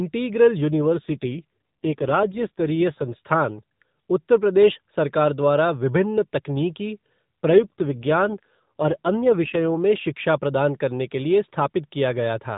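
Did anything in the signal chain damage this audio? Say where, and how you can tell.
Yes, an AMR rate drop at the codec stage, from 0.66 to 3.14 s and 7.50 to 9.75 s. The speech turns buzzier and more synthetic, consistent with the mobile link stepping down from 12.2 to around 5.9 kbps. Unlike packet loss, there are no gaps and the bandwidth stays the same.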